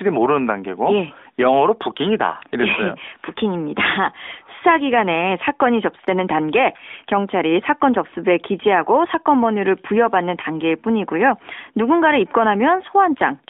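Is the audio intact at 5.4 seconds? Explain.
Yes, the audio is intact at 5.4 s: the speech there carries only the narrowband, phone-line character of the AMR narrowband mobile codec working normally, with nothing breaking or disturbing it.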